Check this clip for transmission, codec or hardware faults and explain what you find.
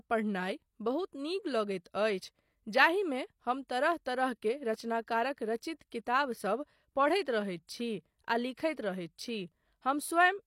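One codec fault stands out: a pre-echo at about 3.68 s, between "जाहिमे हम" and "तरह तरह". The transform codec spreads quantisation noise across its whole block, so noise budgeted for a sharp attack leaks into the quiet instant before it, here over roughly 19 ms. You hear a brief hiss just ahead of the onset, which then lands softened. On a spectrogram, a faint broadband smear precedes the attack's vertical edge; the waveform shows low-level fuzz before the transient.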